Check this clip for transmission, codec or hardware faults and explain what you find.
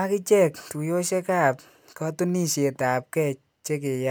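No faults can be heard anywhere in this speech recording. There is nothing to locate or explain, so no fault entries follow.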